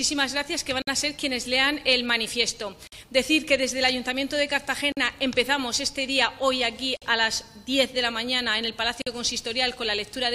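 Silence opens at 0.82 s for 54 ms, then at 2.87, 4.92, 6.97 and 9.02 s for 48 ms each. These are gaps at joins of encoded pieces, arriving every 2 s. Each untrimmed encoder delay and padded frame leaves a smeared dropout before the sound resumes.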